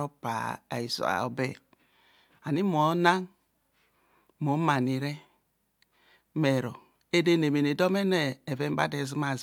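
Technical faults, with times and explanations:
No technical faults can be heard in this speech recording. Nothing in it calls for a time or an explanation.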